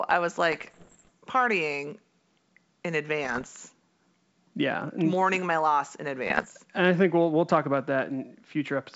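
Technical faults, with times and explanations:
0.53–1.09 s, 3.24–3.47 s and 6.27–6.47 s: bit errors on an ADPCM link. The speech breaks into pops and rough bursts with brief jumps in level. This points to roughly one percent of bits flipped in the first two runs and about 1.5 percent in the last. Each wrong bit upsets the decoder's step size and prediction, so the damage rings on for milliseconds.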